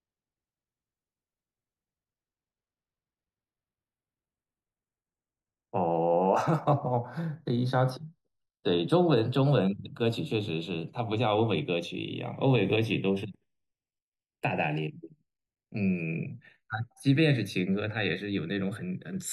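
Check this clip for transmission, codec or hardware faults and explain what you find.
One fault runs through the whole speech clip. Channels drifting apart: the two sides run on separate clocks, off by around 30 ppm, so their delay slides to about half a millisecond. In mono this gives slow flanging, seen as comb notches sweeping across a spectrogram.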